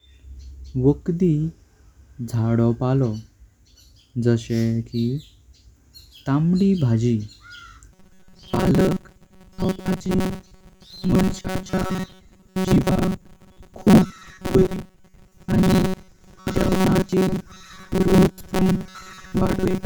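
From 7.93 s to the end at 19.86 s, the speech takes on robotic sound from repeated short buffers. It turns into a rigid, metallic buzz pitched at 188 Hz. It follows the original speech only roughly. The likely cause is new audio arriving too seldom. The gap is filled by replaying the last short block again and again, while real audio is skipped. Most of this stretch is repeats. A 188 Hz buzz fits a block of about 5.3 ms.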